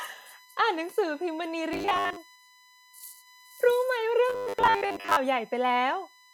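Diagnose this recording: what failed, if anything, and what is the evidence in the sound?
USB frame current leaking into the analogue power or ground puts a fixed 1 kHz USB whine under the speech throughout, strongest at 2 kHz, about 30 dB down.

Buffer starvation in the driver likely caused repeated short buffers, making speech robotic at 1.73–2.18 s and 4.30–5.17 s: a rigid 100 Hz buzz, fitting 10 ms repeats replacing most audio.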